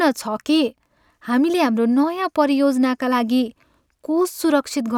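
No technical faults can be heard in this recording.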